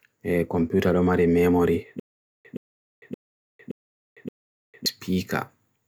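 A stalled player or stream is the likely cause of the stutter with silent gaps heard in this speech clip from 2.00 to 4.86 s: a 121 ms fragment replays five times, each followed by about 451 ms of digital silence, a 572 ms cycle, and the speech meant for that span is lost.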